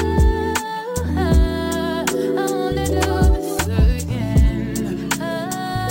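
The rate conversion behind this sound was done by holding each sample rather than interpolating, which fits a move from 24 kHz up to 44.1 kHz with no anti-imaging filter. The result is imaging from sample-and-hold upsampling throughout the clip: a mirrored copy of the spectrum sits between 12 and 24 kHz at about 24 dB below the signal, heard as a bright metallic fizz that rises and falls with the sound and moves against its pitch.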